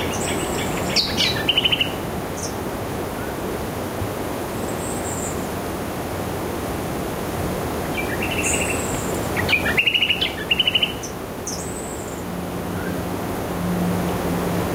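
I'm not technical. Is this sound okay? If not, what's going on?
No, it has a fault called gain pumping, which runs through the whole recording. The overall level keeps being pulled down whenever something loud happens and then creeps back up, so the volume visibly breathes in and out. The likely cause is that the recording level was set too high and an automatic level control kept clamping it. Unlike dropouts or a gate, the sound never vanishes; it just keeps sinking and recovering.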